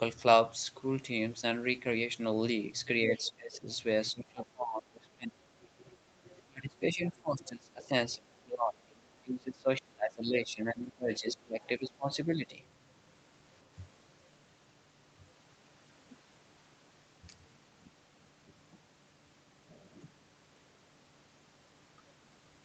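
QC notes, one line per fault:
3.17 to 3.59 s, 5.61 to 6.43 s and 11.16 to 11.7 s: other side's voice leaking through. A second voice sits under the speech. It is about 25 to 30 dB down at first and about 10 dB down near 11.2 s. This is likely loudspeaker echo left behind by the echo canceller.
3.19 to 3.67 s, 4.12 to 5.43 s and 6.09 to 12.51 s: speech suppressed in double talk. The talker's level dips by about 20 to 25 dB, in patches totalling around five seconds in the longest run. This is likely the canceller ducking both voices during overlap.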